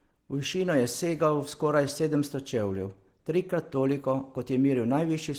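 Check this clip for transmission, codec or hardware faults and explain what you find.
One codec fault runs through the whole recording: Opus compression, audible from start to finish. The speech sounds muffled and hoarse, with a grainy, noisy edge rather than the swirling, watery holes of MP3. That fits the hybrid speech mode an Opus encoder likely switches to at a starved rate around 16 kbps, where band energy is kept but detail is replaced with noise.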